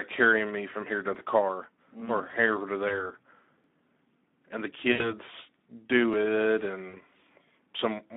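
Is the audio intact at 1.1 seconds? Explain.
No. At 1.15 s there is a tiny skip of a few milliseconds where audio missing between chunks most likely occurs: the processor loses a sliver while switching 2.5-second blocks, and the two sides butt together. Unlike a dropout, no silent gap is heard, only a brief jump.

The whole passage also carries Speex codec damage at about 11 kbps, confined to roughly 250 Hz to 3.7 kHz. Too few excitation bits leave the speech plainly hoarse and noisy. That grainy texture separates it from a simple band limit, which would only sound muffled.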